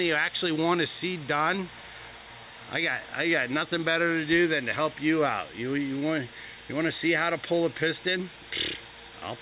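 No technical faults can be heard anywhere in the audio. Nothing in the signal points to a dropout, a distortion or any other transmission problem.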